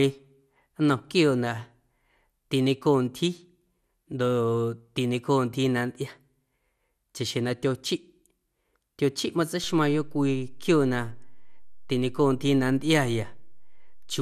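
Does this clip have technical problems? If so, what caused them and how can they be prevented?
Yes. Throughout the speech, the sound is dull and carries a gurgling, granular roughness, with nothing above 15.1 kHz. The likely cause is MP2 compression at a low rate, consistent with roughly 80 kbps, where upper sub-bands drop out and remaining bands are coarsely quantised. Encoding at a higher bitrate, or using a more efficient codec, would prevent this.

At 9.64 s a DC step shifts the waveform's zero line, heard as a low thump while the speech continues unchanged; the offset then holds to the end of the clip. Switching in an offset input or a converter recalibration produces this. A high-pass or DC-blocking filter ahead of recording, and avoiding source switching mid-take, would prevent it.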